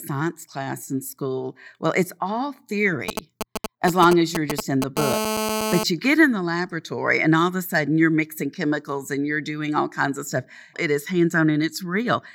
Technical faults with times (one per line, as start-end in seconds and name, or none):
3.09-4.98 GSM signalling bursts
4.98-5.84 GSM phone buzz